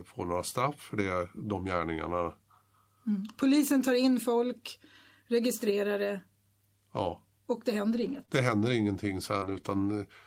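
Packets were lost between 7.93 and 9.65 s: scattered short gaps, about three, each patched by extending the previous sound, leaving brief ticks and smears.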